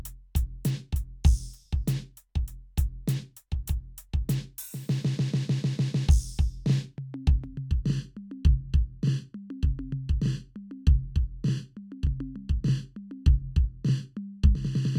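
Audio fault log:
7.44–14.98 s channel delay (comb filtering): one channel lags the other by roughly 0.7 ms. When the two are summed to mono, the shared music cancels at evenly spaced frequencies, first near 700 Hz and then about every 1.4 kHz, leaving a hollow, phasey tone.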